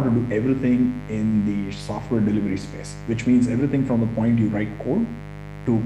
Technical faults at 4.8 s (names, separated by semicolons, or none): mains buzz